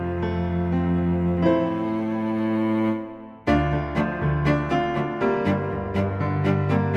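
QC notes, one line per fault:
No faults heard anywhere in the clip.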